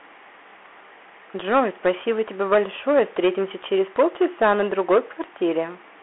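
From start to finish the speech carries hard clipping. It was driven about 8 dB past what one stage could pass, so a few percent of samples hit the ceiling and were cut flat. Those squared peaks throw harmonics upward and are heard as a brittle crackle that appears only on the loudest syllables and vanishes between them. That tie to peak level is what separates it from steady codec grit, which sits under quiet passages too.

Also present throughout is the Bluetooth CVSD headset codec, with damage that is plainly audible. The band is confined to roughly 300 Hz to 3.4 kHz, and nothing survives above 3.8 kHz, so the sound is boxy and telephone-thin. The coder tracks the waveform one bit at a time, which fits a 64 kbps link. Its adaptive step lags behind fast, bright transients, so sibilants turn scratchy and a fine granular hiss lies beneath everything. That constant hiss and slope-lag smear set it apart from simple band-limiting or the peak-only crackle of clipping.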